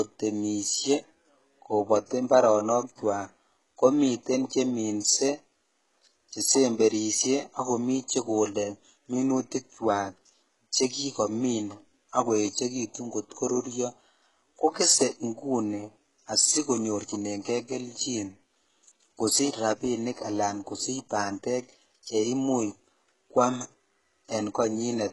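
HE-AAC compression runs throughout the speech, with heavy damage likely from this codec at a bitrate that fits about 12 kbps. Treble is rebuilt from copied lower bands rather than coded, so s sounds come out gritty and lispy.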